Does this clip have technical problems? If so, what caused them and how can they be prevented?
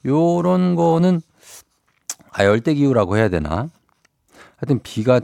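No, no technical problems here.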